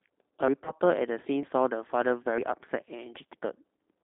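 Throughout, the speech has passed through the G.729 codec at 8 kbit/s, which rebuilds each 10 ms frame from a vocal tract filter, a pitch predictor and a handful of pulses rather than the original waveform. The line band runs only from 300 Hz to 3.7 kHz, so the audio sounds thin and boxed-in, and the damage is plainly audible: a rough, slightly synthetic grain on every syllable.

At 0.48 s the audio jumps forward. The recording was likely captured in one-second chunks, and a short piece, around a twentieth of a second, was dropped at the changeover. The two sides are butted together with no gap, so the sound skips abruptly rather than pausing.

From 0.64 to 0.71 s, 20 ms of audio went missing in transit, which fits a single lost packet, and the decoder filled the hole by extrapolating from its last pitch and filter with falling gain. This is heard as a brief smeared, buzzy stretch that fades, and the sound stays weakened for a few tens of milliseconds after real audio resumes.

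The same chunk skip recurs at 1.43 s, about one second after the first.

Another concealed packet loss of 20 ms runs from 2.23 to 2.27 s, giving a shorter buzzy smear.

The third chunk skip falls at 2.38 s, keeping the roughly once-a-second rhythm.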